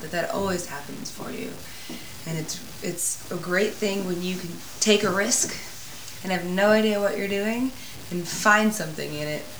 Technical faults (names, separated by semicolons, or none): low bit depth without dither